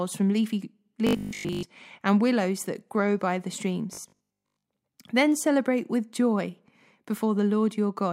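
From 1.07 to 1.63 s, between "from leafy" and "and willows that grow", and again from 3.95 to 4.67 s after "that grow by the", the speech turns into a rigid metallic buzz at 50 Hz: robotic sound from repeated short buffers. Audio likely arrived too slowly, so a 20 ms chunk was looped for most of each stretch. Unlike dropouts or flanging, the fixed buzz pitch ignores the voice's own pitch.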